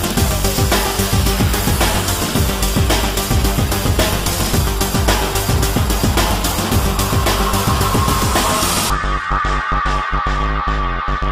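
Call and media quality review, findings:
Bluetooth SBC bit pool drop, 8.70–9.90 s. Treble goes dull and gritty noise rises for about 1.2 s, then clears. Link congestion likely forced the encoder down; the loss fits a bit pool cut from 28 to 13, near 102 kbps, starving upper sub-bands.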